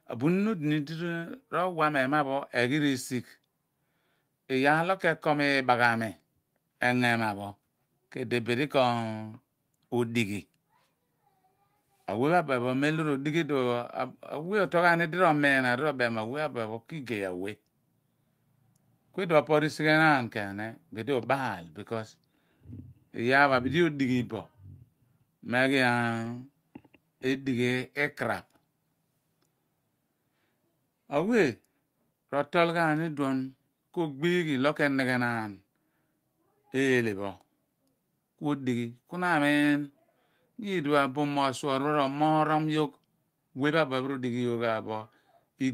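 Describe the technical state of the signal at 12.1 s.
At 12.1 s the speech signal is intact, with no audible dropout, distortion, glitch or other technical fault at that moment.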